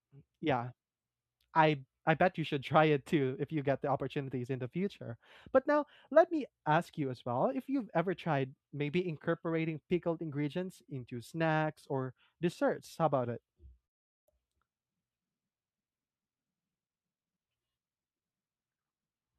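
A long network dropout runs from 13.85 s to 14.28 s, right after "about it". The speech cuts off and the last sound is stretched into a fading buzz, leaving near-silence before the audio resumes at 14.28 s. About 0.42 s of speech never comes back. The likely cause is a stall in packet delivery: the receiver had nothing to play, papered over the gap with synthesized fill that decayed away, then skipped ahead once packets arrived again.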